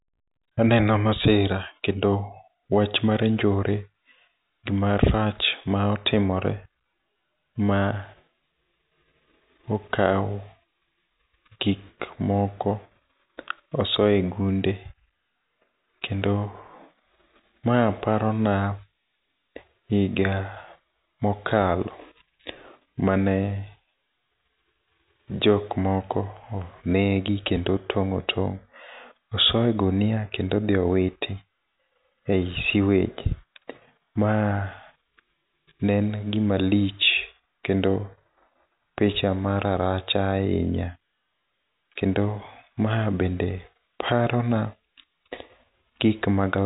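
No technical faults occur anywhere in this speech recording.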